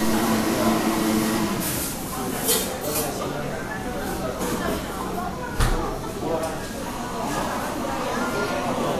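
Throughout, the sound is hissy and grainy with smeared attacks and nothing above 14.2 kHz, likely Vorbis compression at a low bitrate, around 35 kbps, coarsely quantising treble detail.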